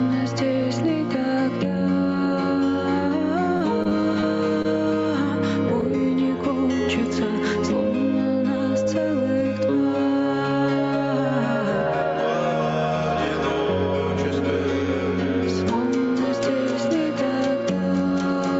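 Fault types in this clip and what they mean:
Gain pumping, throughout: the background rises in quieter moments and drops under each loud sound by around 5 dB, likely because the input gain was set too high and a fast limiter kept clamping it, squeezing loud and soft passages together.
Repeated packet loss (robotic sound), 3.57 to 4.24 s: audio repeatedly failed to arrive in time, and each hole, the longest about 34 ms, was patched by extending the preceding sound. Concealment covers roughly 16% of this stretch, leaving it choppy.
Short concealed packet loss, 4.62 to 4.66 s: about 20 ms of audio went missing and the receiver filled the gap by continuing the last sound before blending back into the real signal, which produces a brief smear or wobble at that point.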